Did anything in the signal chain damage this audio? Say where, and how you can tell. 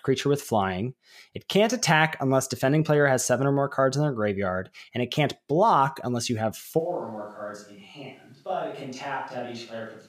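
Yes. At 6.8 s, right after "block unless you have", there is a switch to a distant microphone at the capture stage, and it lasts to the end. The speech turns roomy and hollow at once, with thinner bass. The level falls by roughly 10 dB. Room noise rises to roughly 35 dB below the speech. The change is abrupt, not faded. The likely cause is that the close microphone dropped out and a farther one took over.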